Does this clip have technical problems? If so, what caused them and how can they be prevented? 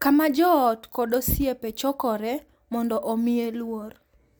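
No, there are no technical problems to report here.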